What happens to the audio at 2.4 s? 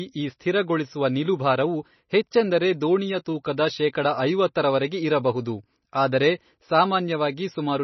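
At 2.4 s the speech carries the same damage heard across the whole clip, most likely MP3 compression at a low bitrate near 24 kbps. Nothing is left above 5.9 kHz, so sibilants lose their edge, and weak frequency lines flicker on and off between frames, giving a watery, swirling texture with smeared onsets. That flickering, not just the missing treble, is what separates it from a simple low-pass filter, which would sound dull but steady.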